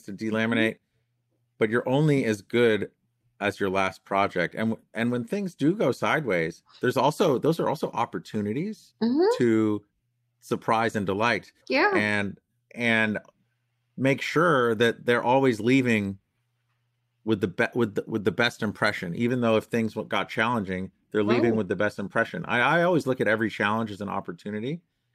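Nothing in this recording stands out as a technical fault, so there's no problem here to walk through.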